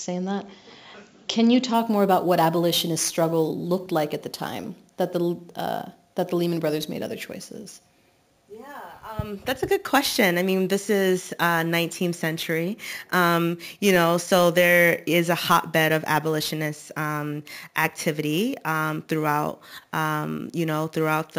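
From 1.74 s, a metallic fizz about 17 dB down rides above 8 kHz. This is imaging from sample-and-hold upsampling: 16 kHz samples were repeated to reach 44.1 kHz with no smoothing filter.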